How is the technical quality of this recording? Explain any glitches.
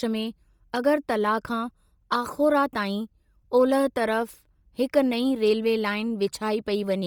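The recording is marred by heavy codec damage for its whole length. Bluetooth LC3 compression, throughout: the transform codec likely discarded much upper-spectrum detail, at a bitrate consistent with about 32 kbps and 10 ms frames, and filled the gap with noise. The speech sounds breathy and grainy, with a cutoff at 20.2 kHz.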